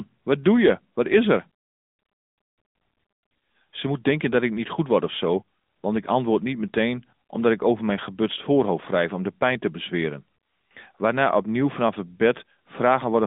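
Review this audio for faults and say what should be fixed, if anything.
The whole recording carries AMR narrowband mobile codec damage, plainly audible from start to finish. The speech sits in a telephone band of about 200 Hz to 3.7 kHz, with nothing above 3.8 kHz, because the codec samples at 8 kHz and rebuilds the voice from a vocal-tract model fed by sparse pulses. The buzzy, synthetic edge on the voice fits a mid-rate mode of around 10.2 kbps. To prevent it, capture or route the audio over a wideband path rather than a narrowband mobile call.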